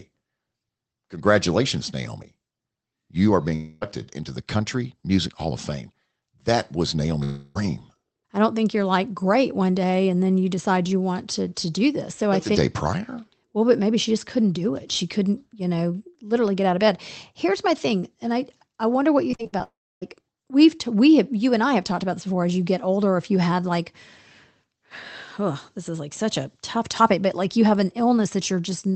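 Long network dropout at 3.55 to 3.83 s: right after "you are", the sound stops arriving for about 0.26 s, and the receiver stretches the last fragment into a fading buzz that covers the whole hole before speech resumes at "into the", with that stretch lost. A second long network dropout at 7.23 to 7.57 s behaves the same way, with about 0.32 s smeared over by concealment and no outright silence. The likely cause of both is a burst of lost packets.

Repeated packet loss (robotic sound) runs from 19.31 to 19.62 s, just after "I wonder what you". Five short holes, the longest 58 ms, are each patched by repeating the preceding sound, so nearly half the stretch is synthetic. The result is choppy, with pieces missing.

A final long network dropout follows immediately at 19.64 to 20.03 s. This time the concealment buzz fades out and leaves about 0.28 s of silence before audio returns, without the missing 0.38 s. 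Throughout, the call codec limits the band to about 8 kHz.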